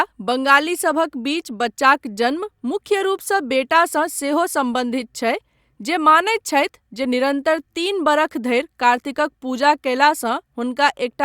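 No technical fault can be heard anywhere in the recording. There is nothing to place in time and nothing to trace back to a cause.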